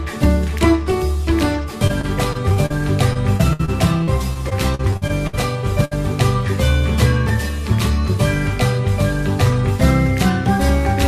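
From 1.87 to 2.80 s and again from 3.13 to 5.35 s there's repeated packet loss, giving a choppy, robotic sound. Short holes, up to 60 ms, keep getting patched by stretching the previous sound. Then at 5.85 to 5.93 s a burst of packet loss drops about 60 ms. The last sound is held and faded before the audio jumps ahead.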